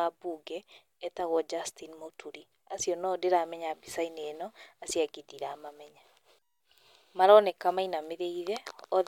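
No technical faults can be heard anywhere in the speech; the signal stays steady and intact throughout.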